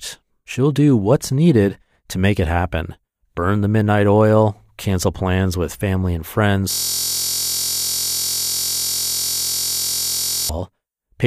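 Speech that, right after "plans with family and", turns into a steady buzz at about 43 Hz from 6.71 to 10.49 s. This is a system hang loop: a 23.22 ms slice, which fits a 1024-sample buffer, repeats 163 times while the machine freezes.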